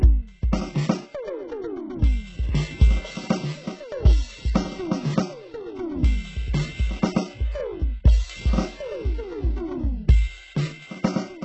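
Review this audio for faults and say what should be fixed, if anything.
Throughout, the music has gritty, metallic treble that does not match the body of the sound, and nothing reaches above 8 kHz. This is likely HE-AAC compression at a very low bitrate, around 8 kbps, with heavy damage: the upper band is rebuilt from copied lower bands, so its harmonics misalign. A spectrogram shows a hard ceiling at 8 kHz and repeated, smeared patches in the top band. Encode at a much higher bitrate, or with a full-band codec, to avoid this.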